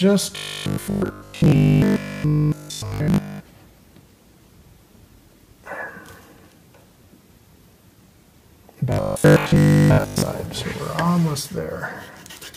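Two stretches of robotic sound from repeated short buffers show up here, from 0.36 to 3.40 s and again from 8.92 to 10.22 s. In both, the audio collapses into a hard, metallic buzz at 50 Hz. That pitch points to a 20 ms chunk being looped, likely because new audio arrived too slowly and the gaps were filled by replaying the last bit. The first stretch sounds almost entirely repeated; the second is mostly repeated, with some real audio coming through.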